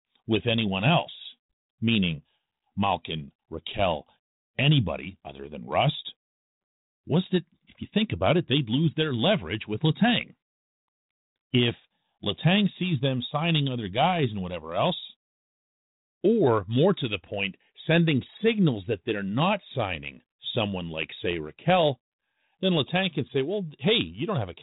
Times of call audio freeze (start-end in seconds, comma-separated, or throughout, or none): none